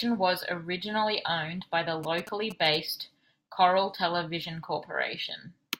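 A nearby 2G phone exchanging signalling with its network has its radio bursts picked up and rectified by the audio circuitry, producing GSM signalling bursts in this speech clip from 2.04 s to 2.76 s. For about three quarters of a second, a galloping dit-dit-dit pattern of short buzzes at a 217 Hz burst rate sits under the speech, roughly 15 dB below it.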